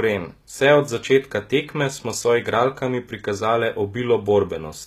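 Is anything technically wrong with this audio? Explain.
Yes, there's one problem, and it runs through the whole speech clip: HE-AAC compression damage that's plainly audible. The treble sounds bright but fake. The s sounds come out gritty and a bit lispy, with a metallic sheen on top. That's most likely HE-AAC at a low rate, which fits something around 20 kbps. The codec only really encodes the lower band and rebuilds the top end by copying lower bands upward, so the upper harmonics don't line up with the real ones.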